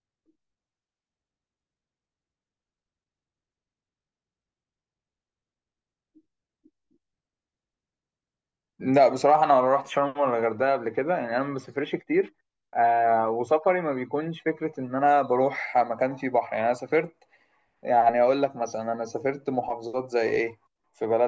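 No technical faults can be heard anywhere in this speech recording.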